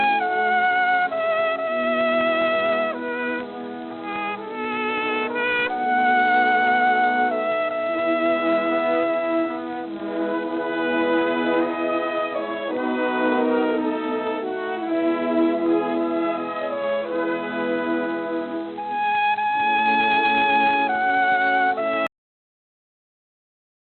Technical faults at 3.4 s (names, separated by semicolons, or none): none